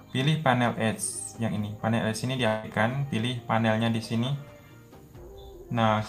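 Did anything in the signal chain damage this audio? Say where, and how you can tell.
Yes. From 2.47 to 2.66 s the sound stops carrying anything new: the last moment before the gap is drawn out into a buzzy, fading tail for about 160 ms, and then the audio resumes abruptly with roughly that much of the original missing. This is likely a long network dropout, with the receiver's concealment filling the hole. On a spectrogram the harmonics smear horizontally and decay instead of evolving. The waveform shows a repetitive, shrinking pattern and then a hard resumption with no pure silence in between.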